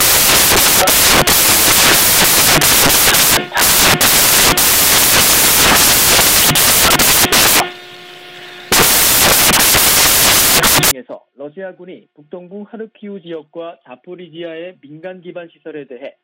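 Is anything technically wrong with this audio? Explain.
Yes. From the start to 10.91 s the audio suffers from samples built from the wrong bytes. The reader assembles each sample's bytes out of order or misaligned, so the rapidly changing low-order bits land in the most significant position. What comes out is loud, harsh broadband noise, close to white on loud sounds. Unlike ordinary background hiss, it is loud and harsh, and it stops abruptly at 10.91 s.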